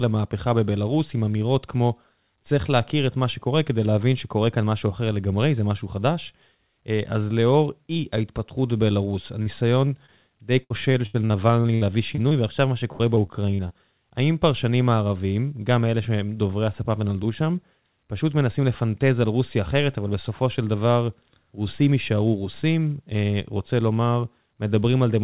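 At 9.42 s and again at 10.06 s there is short concealed packet loss. About 40 ms of audio is missing in the first gap and about 20 ms in the second. Those packets never reached the decoder in time. The receiver bridged each hole by extending the preceding sound and then blended back into the real signal. Each gap is heard as a brief smear or wobble in the speech, and a short consonant can drop out.

From 10.64 to 12.33 s the loss turns into repeated packet loss with a robotic sound. Ten separate gaps remove about 380 ms, roughly a fifth of that stretch. The longest gap is 77 ms. Because each patch is followed closely by another, the speech turns choppy and robotic, with pieces missing. A second burst follows from 12.93 to 13.72 s. Five gaps remove about 160 ms there, and the longest is 69 ms. It sounds the same. Throughout, the call path's band stops at 4 kHz, which points to a narrowband codec such as G.711.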